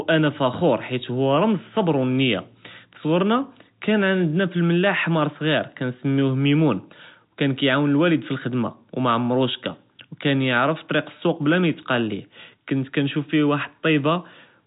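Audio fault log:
No faults heard anywhere in this speech recording.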